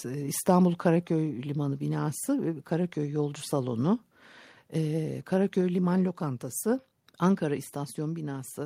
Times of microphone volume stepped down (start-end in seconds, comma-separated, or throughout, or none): 1.02, 6.63